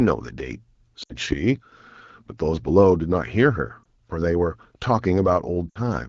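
Lost AMR speech frames at 1.03–1.15 s, 3.84–3.86 s and 5.70–5.79 s. The decoder bridged corrupted frames by repeating its last good pitch and vocal tract settings at falling gain. The two 60 ms gaps sag to near silence within two frames, while the 20 ms one at 3.84 s is a quick dip.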